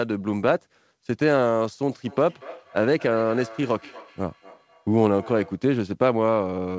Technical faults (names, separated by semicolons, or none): feedback echo between two devices